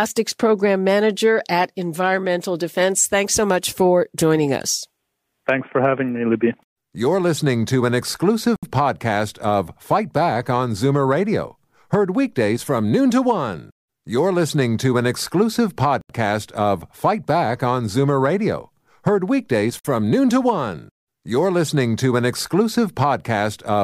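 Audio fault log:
8.56 to 8.63 s, 16.01 to 16.10 s, 19.79 to 19.85 s, Bluetooth stall: speech drops to silence for 67, 82 and 54 ms, likely from the headphone buffer running dry. Each shows as a flat waveform gap and a blank vertical spectrogram band.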